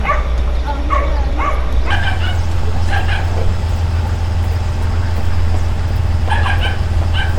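A recording of sounds, and from 1.91 s to the end there's a section at the wrong speed: it runs about 1.39 times fast, so everything jumps up roughly five semitones and hurries along. Likely an editor or player stretching it against the wrong clock.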